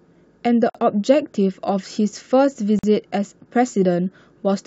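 A speech recording with two gaps at joins of encoded pieces. The sound drops out from 0.70 to 0.75 s, about 49 ms of silence. It drops out again from 2.79 to 2.84 s, about 45 ms. Both gaps have edges smeared by the codec. The speech resumes exactly where it stopped. Separately encoded pieces were joined without trimming, so each kept its encoder start delay and end padding.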